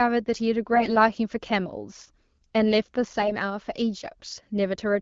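From 0.74 to 0.90 s and 3.21 to 3.34 s, AMR bit errors occur. Flipped bits misplace excitation pulses. The speech turns hoarse and gargly, with roughly 5% of bits in error in the first burst and 7% in the second.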